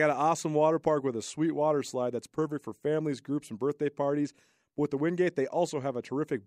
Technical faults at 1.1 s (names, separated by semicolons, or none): none